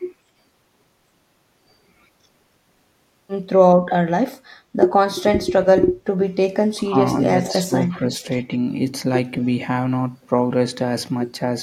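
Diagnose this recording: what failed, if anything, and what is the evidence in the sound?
The call processing stage failed, most likely the echo canceller during double talk. This is speech suppressed in double talk: it mistook the talker for loudspeaker echo and attenuated the speech, dipping it about 15 dB at 6.77–6.96 s and about 10 dB across 7.48–8.22 s.

The same call processing stage also shows echo leak. The canceller likely left residual loudspeaker pickup in the outgoing path, so a faint copy of the speech returns about 202 ms late, at 7.43–7.53 s (about 15 dB down) and 7.81–7.99 s (about 25 dB down).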